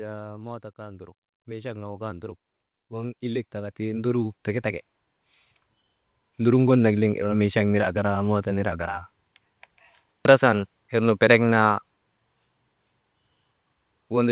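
Right at the start, from about 0.05 to 0.69 s, there's automatic gain falling. The gain control decides the opening is too hot and pulls its gain down by about 3 dB over that half-second or so. It's a modest dip, but the speech and the room behind it sink together, so it sounds less like the talker backing off and more like someone easing a fader down on the whole feed.

Almost straight after, from 0.76 to 4.92 s, the opposite kicks in: automatic gain rising. The control now reads the input as too quiet and climbs back up by about 15 dB, slowly, across roughly four seconds. You hear the speech and its background noise swell up together, a long steady bloom in level. It's a classic pumping see-saw, a small duck followed by a much bigger recovery. All of this sits on a narrowband call path with nothing above 4 kHz, which fits G.711 mu-law at 64 kbps.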